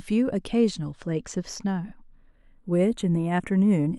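Speech whose channels drift apart throughout: clocks tens of ppm apart slide the inter-channel delay to roughly a tenth of a millisecond, so mono notches creep one way instead of sweeping back and forth like a flanger.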